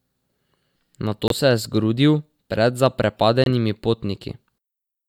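At 1.28 s and again at 3.44 s the speech drops into abrupt silence from a corrupt frame muted: damaged compressed data was rejected, leaving gaps of 36 ms and 52 ms, the second likely spanning several frames.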